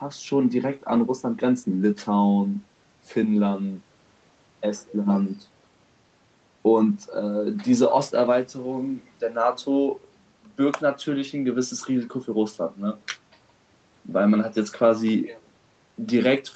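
From 0.68 s to 4.07 s, a call bitrate drop hits: the bandwidth estimate falls and the Opus encoder is pushed from 32 kbps down to 18 kbps, staying at that floor for about 3.3 s. With fewer bits per frame the speech is quantised more coarsely, so the voice takes on a rough, watery texture. It clears once the rate climbs back to 32 kbps, the call path's usual rate with its 8 kHz bandwidth.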